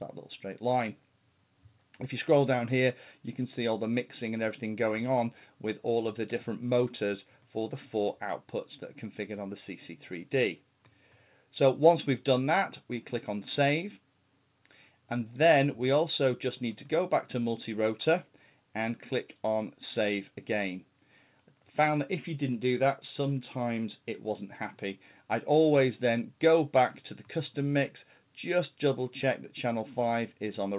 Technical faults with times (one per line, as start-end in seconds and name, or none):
none